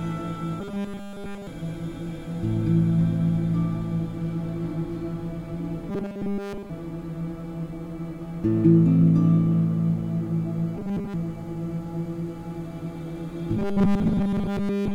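From 0.60 to 1.47 s, 5.89 to 6.70 s, 10.76 to 11.14 s and 13.57 s to the end, robotic sound from repeated short buffers turns the sound into a rigid 200 Hz buzz. It is likely caused by a 5 ms segment being replayed while the real audio is skipped. Unlike a hum, it follows the sound's rough shape.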